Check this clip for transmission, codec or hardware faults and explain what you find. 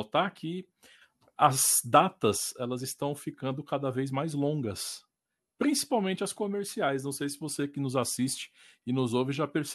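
No technical fault can be heard anywhere in the recording, and the speech signal stays continuous and intact throughout.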